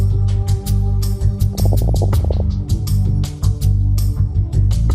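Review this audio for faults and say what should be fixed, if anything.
A dull, gurgling, granular character runs through the whole clip, with upper frequencies thinning out and flickering in and out. This is MP2 compression damage, plainly audible. The likely cause is MPEG Layer II encoding starved of bits, so it switched off its upper sub-bands and quantised the remaining ones coarsely. The degree of damage fits a rate of about 80 kbps. Encoding at a higher bitrate, or with a more efficient codec, would prevent it.

From 1.53 s to 2.40 s the sound turns into bubbling, muddy squelches and chirps. This is DAB burbling, caused by bit errors slipping past the error correction into the MP2 audio data. Corrupted samples put short blips of noise into single sub-bands, and corrupted scale factors make sub-bands jump in level for up to a frame. The extent points to roughly 40 damaged frames, with an error rate somewhat under one percent. 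Better reception, through a stronger signal or a better-placed antenna, would prevent it.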